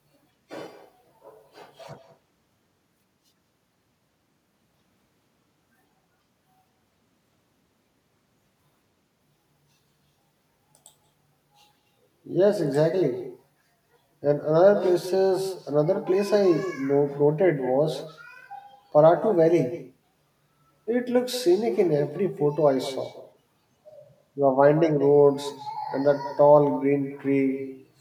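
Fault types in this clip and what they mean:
Echo with no canceller: the far end is playing the call through a loudspeaker, their microphone catches it, and nothing strips it back out, so the talker's own speech returns after the network round trip. Here it runs through the whole clip, trailing the talker's speech by roughly a fifth of a second at about 13 dB below the direct speech, a fainter, thinner shadow that smears each phrase.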